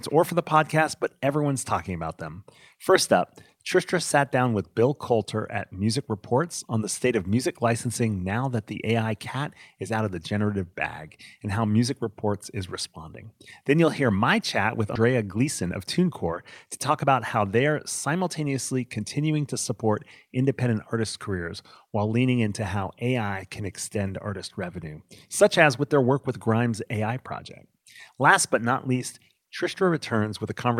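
A speech recording with two playback faults around the halfway point. At about 14.95 s there is a skip ahead. Roughly a fifth of a second of audio was thrown away, either lost in transit or dropped by an overflowing jitter buffer while newer audio was already queued. Playback jumps straight past the gap with no fill, so the talking lurches forward, the sounds on either side of the cut are joined almost directly, and part of the speech simply goes missing. Right after, from 15.04 to 16.25 s, comes a jitter buffer speed-up. The receiver was holding more audio than its target, so it trimmed a run of short pitch-period-sized pieces, about a tenth of a second in total, to pull the delay back down. The speech plays at 107% speed with its pitch unchanged and sounds briefly hurried.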